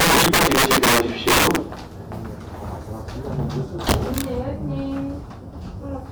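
From 0.00 to 1.56 s, integer overflow pushes the signal about 10 dB past the limit. Peaks wrap to the opposite sign instead of being limited. Loud moments crack violently, harsher than clipping. It returns from 3.89 to 4.21 s, about 8 dB over.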